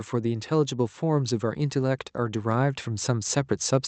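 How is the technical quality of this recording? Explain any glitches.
The recording has one audible fault, a slow rise in level through most of the clip. Automatic gain rising runs from about 0.1 s to 3.37 s. The gain control judged the incoming speech too quiet and kept turning its gain up, about 6 dB in total. Because the gain acts on the whole signal, the voice and the background noise swell together, with no sudden jump. The clip simply grows steadily louder as it goes. The speech passes through a call codec whose top end stops near 8 kHz, which fits a wideband Opus setting.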